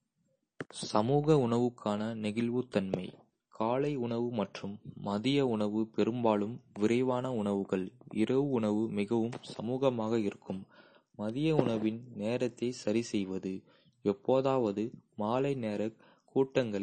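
Speech with MP3 compression artefacts running through the whole clip: nothing is present above 9 kHz, and weak high-frequency detail flickers on and off between frames, giving a watery, swirly texture on s sounds. The damage is plainly audible, which likely points to a low bitrate around 32 kbps.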